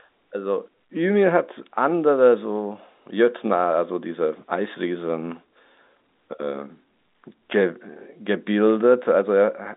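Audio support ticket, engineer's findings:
No defects found; speech sits in a telephone band of roughly 250 Hz to 3.7 kHz with nothing above 3.8 kHz, consistent with G.711 A-law telephone coding working as designed.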